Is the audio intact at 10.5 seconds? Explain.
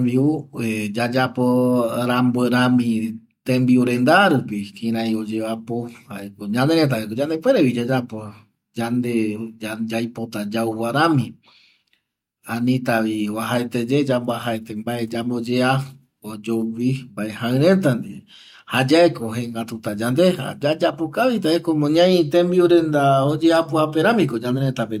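Yes, the audio is intact at 10.5 seconds, with no fault at that moment.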